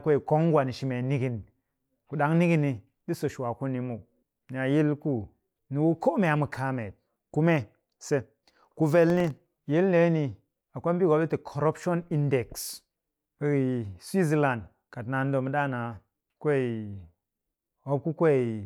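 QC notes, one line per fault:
9.10 to 9.60 s, processor overload crackle: about ten tiny buffers, probably a millisecond or two each, miss their deadlines and drop to silence, leaving a brief gritty crackle.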